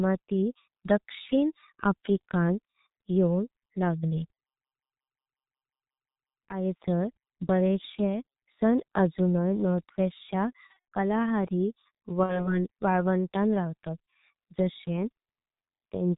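The whole speech clip passes through the G.723.1 codec, at a rate that fits 6.3 kbit/s. Damage is heavy: muffled, hoarse, no content above 4 kHz, smeared consonants. VoIP packet loss concealed by the speech codec occurs from 10.67 to 10.78 s. The decoder guesses ahead from its last frame, leaving a buzzy, fading smear. It recurs from 12.23 to 12.58 s, right after "च्या कालाहारी", and the voice stays weak or distorted for tens of milliseconds afterwards.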